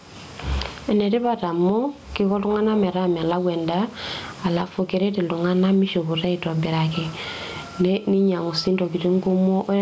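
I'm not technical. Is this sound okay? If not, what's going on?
No. Gain pumping runs through the whole clip: loud and soft parts end up squashed closer together in level. The likely cause is a microphone level set far too high, with an automatic limiter pulling it down hard whenever speech gets loud.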